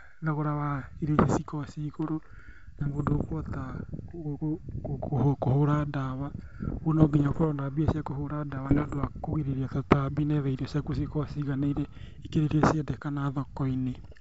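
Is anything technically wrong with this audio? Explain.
Yes. There are bit errors on an ADPCM link, in three bursts: 2.79 to 3.31 s, 7.00 to 7.45 s, and 8.65 to 9.10 s. Each flipped bit upsets the decoder's step size and predictor, so the damage rings on briefly. It sounds like pops and rough crackle with short jumps in level. The middle burst is the harshest, with an error rate near one percent. The speech sits in a G.722 wideband channel in the full 64 kbit/s mode.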